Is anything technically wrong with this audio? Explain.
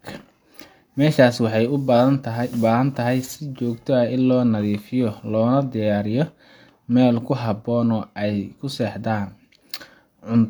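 No, nothing technically wrong can be heard here.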